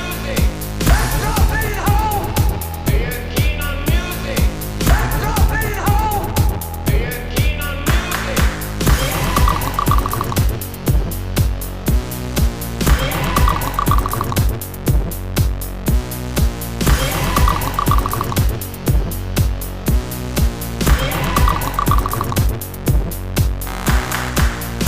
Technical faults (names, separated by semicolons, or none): computer activity noise